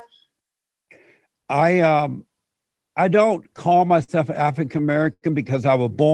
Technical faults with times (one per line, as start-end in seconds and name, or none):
3.43-4.11 repeated stalls (stutter)
4.52-5.25 repeated stalls (stutter)